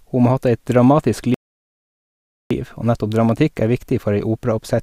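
Speech cuts to silence at 1.34 s, just after "ha hatt eit dramatisk", and resumes at 2.51 s, a 1.16 s gap from a likely playback stall, the player starved of data or blocked.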